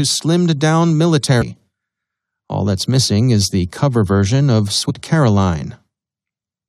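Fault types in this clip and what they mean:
Damaged data in a compressed stream, at 1.41 to 1.43 s and 4.89 to 4.91 s: corrupted bytes in the compressed speech make the decoder misread those frames, lose sync and hunt for the next frame header, leaving two brief glitches of about 20 ms each.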